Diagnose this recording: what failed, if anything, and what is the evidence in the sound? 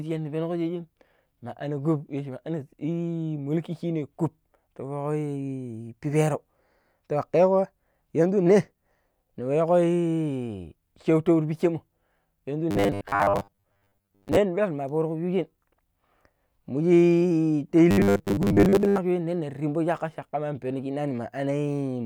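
The speech turns robotic twice: from 12.71 to 14.40 s, and from 17.91 to 18.99 s. In both stretches a rigid metallic buzz at 100 Hz sits over the speech, which still follows its rough shape. The stage is the driver or buffer. The likely cause is audio arriving too seldom, so short buffers are replayed. A 100 Hz buzz fits 10 ms repeats. About half the first stretch is repeated material. Most of the second is.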